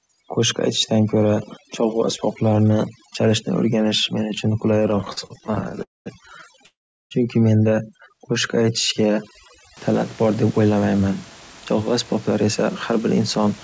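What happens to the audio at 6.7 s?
At 6.7 s you're inside a call audio freeze running from 6.66 to 7.13 s. The sound stops and holds for about 450 ms, with roughly 380 ms of that dead silent, then picks up where it left off with nothing lost. The likely cause is delayed packets draining the jitter buffer.

On top of that, overdone noise removal runs from the start to 9.77 s. The suppressor is cutting bands it mistakes for noise, which leaves near-silence with twinkling specks in the background.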